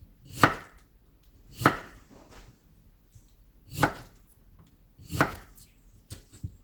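Throughout the clip the audio carries plainly audible coding damage, most likely Opus compression. The texture is muffled and hoarse, with a rough, grainy quality where cleaner detail would be expected, a sign of the encoder working in its hybrid mode and substituting approximated or noise-filled bands for real content. Bandwidth is not the issue here: the spectrum stays fullband, reaching about 20.1 kHz. The degree of damage fits a low bitrate of around 16 kbps.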